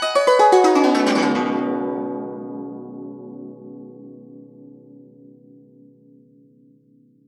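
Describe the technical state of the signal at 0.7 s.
At 0.7 s the music plays through intact, with no dropout, click, distortion or other fault in the signal.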